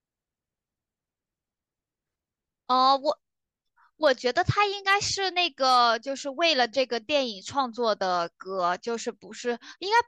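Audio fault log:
4.06 s, 4.62 to 4.94 s, 5.69 to 5.87 s and 9.96 to 9.99 s, hard clipping: a brief crackle at 4.06 s, then crackle on the peaks of the later stretches of speech. The signal runs about 1 dB past the converter's limit at 4.06 s and about 2 dB past it elsewhere. Each peak is sliced flat at the converter's limit, and those squared-off tops add high harmonics that the ear hears as crackle.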